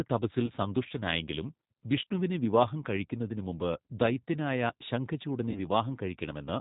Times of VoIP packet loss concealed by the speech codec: 0.46-0.50, 2.05, 5.51-5.60

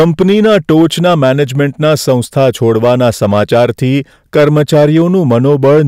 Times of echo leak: none

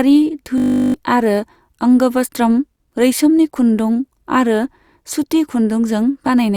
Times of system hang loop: 0.58-0.94

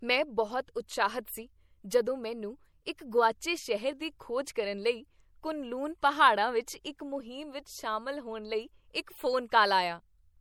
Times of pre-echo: 1.89

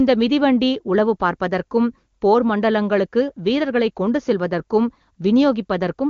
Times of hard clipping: none

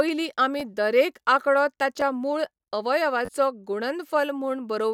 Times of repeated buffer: 0.60, 2.01, 3.25-3.29

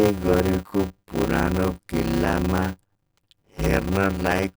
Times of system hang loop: none

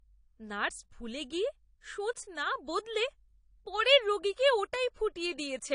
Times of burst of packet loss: none

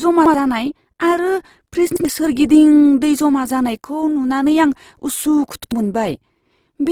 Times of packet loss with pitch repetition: none

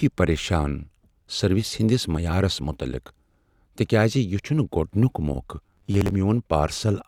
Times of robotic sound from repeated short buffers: 5.66-6.14

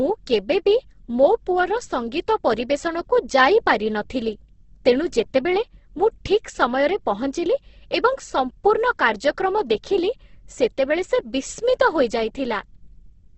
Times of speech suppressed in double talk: none

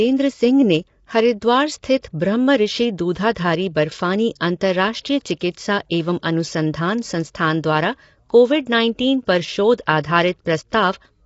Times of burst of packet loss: none

